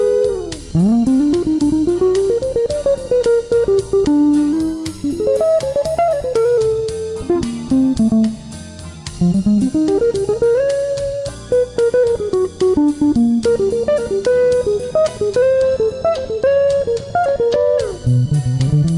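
From 4.53 to 6.58 s the sound runs fast and high, a wrong sample rate. Speed rises 1.09 times and pitch about 1.5 semitones, which fits 22 kHz audio played at 24 kHz.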